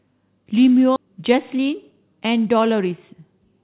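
At 0.96 to 0.98 s the speech jumps abruptly forward with no gap. This is a skip ahead: roughly 0.7 s of audio was dropped and the two sides joined directly. From 1.06 to 3.15 s the speech runs hurried at unchanged pitch, about 12% fast. This is a jitter buffer speed-up, trimming pitch periods to shed roughly a third of a second of excess delay. The telephone-narrow sound, with nothing above 4 kHz, fits a G.711 call path.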